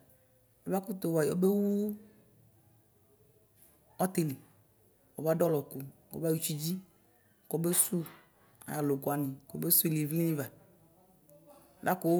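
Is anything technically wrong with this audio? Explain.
No, nothing technically wrong can be heard in this speech recording; the signal stays steady and intact throughout.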